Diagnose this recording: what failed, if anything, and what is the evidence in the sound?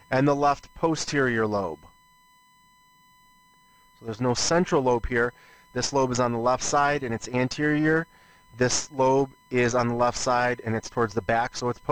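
USB whine is audible from start to finish, a steady fixed-pitch tone at 1 kHz sitting roughly 35 dB below the sound. The fault is in the analogue wiring. Current drawn in the bus's 1 ms frames leaks through shared power or ground into the signal path.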